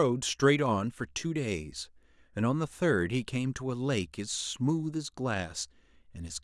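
No technical faults can be heard anywhere in this speech recording; the signal stays steady and intact for its whole duration.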